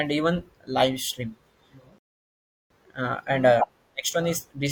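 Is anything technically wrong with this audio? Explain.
Yes. A rebuffering stall runs from 1.98 to 2.70 s: playback exhausted its downloaded audio and froze, leaving 0.72 s of silence before the speech resumes unbroken at "uh and uh".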